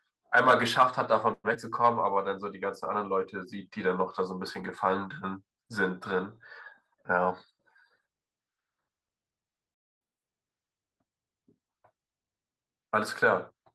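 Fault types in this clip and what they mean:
call audio freeze: around 1.33 to 1.46 s the last sound is stretched into a fading tail, then 30 ms of silence; likely delayed packets emptying the jitter buffer, nothing lost.
short concealed packet loss: at 1.54 to 1.57 s about 40 ms never arrived; the receiver extrapolated only 8 ms, so the sound briefly smears and skips ahead.
jitter buffer slow-down: from 1.69 to 2.15 s repeated pitch periods add 36 ms, so the sound runs at 94% speed with unchanged pitch.
jitter buffer speed-up: between 6.91 and 8.46 s short pitch periods are cut, removing about a tenth of a second; the sound runs at 106% speed, same pitch.
playback stall: at 9.75 s the output goes silent for 0.27 s mid-flow before resuming, likely because the player ran out of data or was blocked.
catch-up at higher speed: from 10.01 to 10.28 s the backlog plays at double speed, raising pitch by about ten semitones, then settles back to normal.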